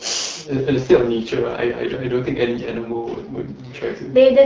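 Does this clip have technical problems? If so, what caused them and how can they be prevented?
Yes. An AMR rate drop runs from 0.41 to 3.88 s. When the radio link weakened, the network told the AMR-WB (HD Voice) codec to code the speech with fewer bits and spend the rest on error protection. The bandwidth stays the same and nothing drops out, but the speech turns rough, raspy and synthetic. The change in quality suggests a fall from the normal 12.65 kbit/s mode to about 6.6 kbit/s. After 3.88 s the speech returns to the lighter coding heard at the start. Better coverage or signal strength at the handset keeps the link strong enough to hold the higher rate.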